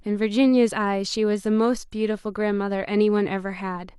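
Speech clip; from 1.31 s to the end, the adaptive stream drops to a lower bitrate. Codec artefacts rise suddenly with no gap, which fits a 32 kbit/s HE-AAC version.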